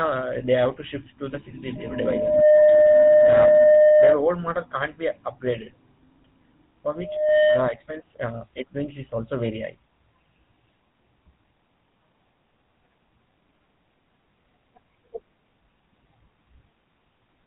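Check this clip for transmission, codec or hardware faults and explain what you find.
The speech carries GSM full-rate codec damage throughout, plainly audible from start to finish. The codec models the vocal tract and excites it with regularly spaced pulses from a decimated residual, giving a buzzy, gravelly roughness that fits the 13 kbps full-rate coder. A spectrogram shows everything above 4 kHz empty and harmonics smeared.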